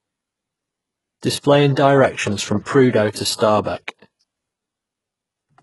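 Throughout, the treble sounds gritty and metallic and stops dead at 11.5 kHz, likely HE-AAC compression at a very low bitrate near 12 kbps, with band replication faking the upper harmonics. A spectrogram shows a hard ceiling and smeared, copied-looking upper bands. Pre-echo follows at 3.12 to 3.15 s, 3.36 to 3.40 s and 3.63 to 3.66 s: quantisation noise leaks ahead of each attack, adding a brief hiss of 32, 46 and 29 ms that shows as a noise haze before the sharp onset in the waveform.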